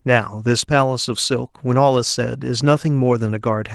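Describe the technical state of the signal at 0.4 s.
At 0.4 s you're just inside a stretch of repeated timing corrections that runs from about 0.36 to 3.28 s. The receiver keeps slipping in small repeated bits to stay in step, so playback runs at roughly 98% and picks up around 70 ms overall. You hear it as faint hiccups and a slightly dragging, uneven tempo.

Underneath that is clock drift between sender and receiver, present across the whole clip. The sender's clock looks to be running about one and a half percent slow, so the jitter buffer keeps draining and has to be topped up. That's what drives those irregular little stumbles rather than any single dropout. The Opus-style coding itself sounds ordinary, with the top end stopping around 12 kHz.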